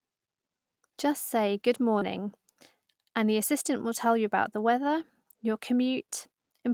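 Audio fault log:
1.99 to 2.03 s, short concealed packet loss: Right after "say good" there's a brief smear where about 20 ms of audio never showed up in time. The decoder papered over roughly 18 ms of it by carrying on the last bit of sound, pitched if it was voiced or as shaped noise if not, then blended back into the real signal. That stretched-out continuation is why you hear a quick wobble instead of a clean dropout.
2.01 to 2.03 s and 4.87 to 4.89 s, lost packet rebuilt from error correction: Each of these is a single 20 ms packet that went missing, once overlapping the tail of the spot after "say good" and again after "tell you about the". The following packet carried a low-bitrate backup copy, and the decoder played that instead, so nothing drops out. The trade-off is a short patch that sounds rougher and noisier than the audio on either side.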